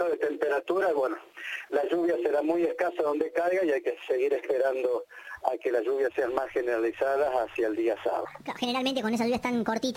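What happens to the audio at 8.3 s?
A section at the wrong speed begins at 8.25 s and runs to the end of the clip at 9.96 s. The audio suddenly plays about 1.45 times faster than it was recorded, most likely because this stretch was rendered against the wrong clock. Speed and pitch rise together, so everything jumps up by about seven semitones and sounds high and hurried, with events crowding closer together until the clip ends.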